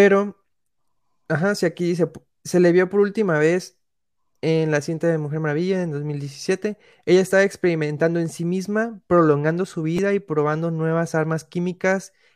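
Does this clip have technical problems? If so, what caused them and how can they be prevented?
Yes. At 9.97 s there is a repeated buffer: fresh audio arrived late, so the device replayed its last chunk, about 5.8 ms long, three extra times. This fits a 256-sample buffer and is heard as a brief buzzy click, with roughly 20 ms of the speech lost. A larger output buffer or higher priority for the audio thread would prevent it.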